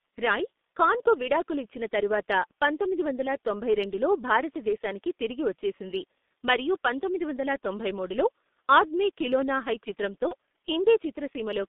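The speech is carried through the G.723.1 codec for the whole clip. The sound points to a very low rate, which fits about 6.3 kbit/s. The band is squeezed to roughly 200 Hz through 3.6 kHz. Nothing above that comes through. The coder models the voice in long 30 ms steps and heavily at that. The voice sounds muffled and hoarse. Consonants smear together and lose their edges.

At 10.28 s, just after "ఆద్మీ ఖిలోనా హై చిత్రంతో", there is VoIP packet loss concealed by the speech codec. The gap points to a single lost 30 ms frame. The decoder filled it by repeating its last pitch and filter settings at falling gain. That section turns into a short buzzy tone or coloured noise that fades. The voice stays weak or distorted for tens of milliseconds after about 10.34 s, while the decoder's state recovers.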